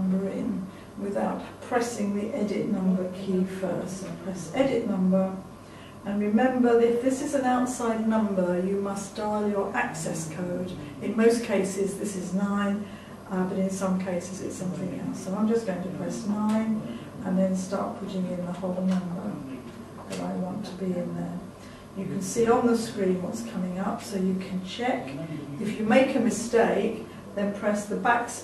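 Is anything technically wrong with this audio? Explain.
No, nothing technically wrong is audible here.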